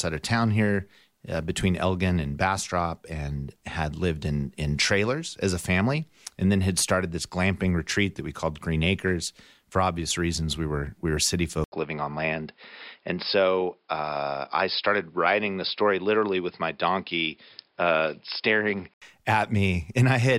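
The recording input was likely switched to a poorer device partway through this speech clip. Just after "were we were city", at 11.64 s, an 80 ms silence marks the switch, and from there to 19.02 s the sound turns dull and boxy, with nothing above 5.2 kHz and a faint new background noise well below the speech, though loudness barely changes. At 19.02 s the full, brighter band returns.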